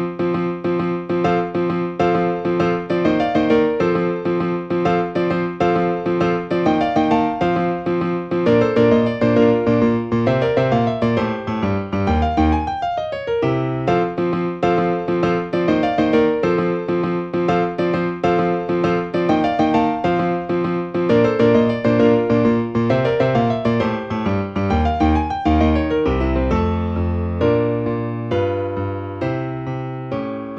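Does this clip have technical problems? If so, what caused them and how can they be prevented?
No, nothing in this recording points to a technical fault, so there is no cause to trace and nothing to prevent.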